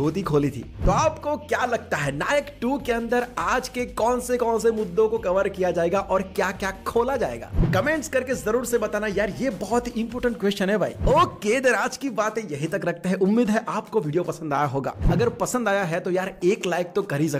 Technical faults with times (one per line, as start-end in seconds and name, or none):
0.26-17.26 clock slip clicks